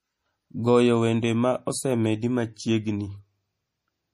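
From start to finish, the speech carries plainly audible MP3 compression damage. Nothing sounds above 15 kHz, so the top end is sheared off flat. Weak frequency components drop in and out between frames. That gives a watery, swirling texture, and the s sounds turn metallic and chirpy. Consonant attacks smear. The likely cause is an encoder starved of bits, which fits a bitrate around 40 kbps.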